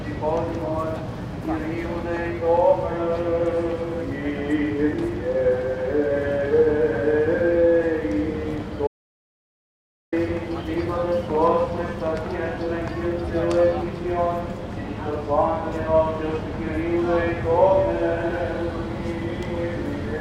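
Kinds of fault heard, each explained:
Audio dropout to silence: from 8.87 to 10.12 s the sound cuts to silence with no room tone for about 1.25 s, likely an input lost while recording continued.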